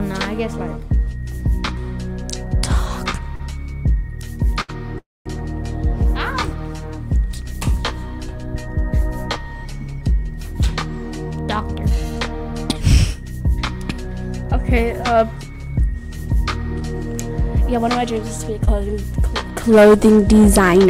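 Two short stalls from late packets come first, at 3.35 s and 4.62 s. The last sound is held for 42 ms and then 69 ms while the jitter buffer sits empty, and playback then resumes at the same point. Nothing is lost, which separates these from concealed loss.

A call audio freeze runs from 4.98 to 5.27 s, adding 270 ms. It is longer than the stalls, and it decays into about 210 ms of silence before picking up where it stopped. It was likely caused by packets held up in transit.

From 10.48 to 18.18 s a jitter buffer speed-up plays the audio at 101% speed. Short pitch-period pieces totalling roughly a tenth of a second are removed to trim the built-up delay. The pitch stays put, unlike resampling, so it does not sound noticeably hurried.

Short concealed packet loss appears at 16.80 s and 18.65 s. Each time 20 ms never arrived and was patched by extending the preceding sound before blending back. 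The result is a brief smear or wobble where real content is actually gone, rather than merely delayed.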